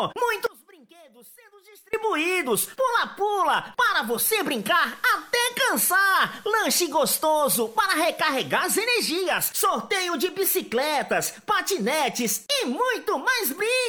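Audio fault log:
0.46 to 1.93 s, audio dropout to a faint residue: the sound cuts out abruptly for about 1.47 s and returns just as suddenly, with no fade either side. The gap is not silent. A faint sound carries on roughly 25 dB below the normal signal level. The likely cause is the wanted feed being lost while the downstream path stayed live, so only a weak residue got through.
4.06 to 9.37 s, digital radio blending to analogue: the receiver loses its digital stream and cross-fades over 285 ms to the station's FM broadcast, then blends back the same way at the end. During the FM stretch, hiss rises to around 30 dB below the signal, and the level shifts by about 1 dB. The two switches are quick blends rather than hard cuts.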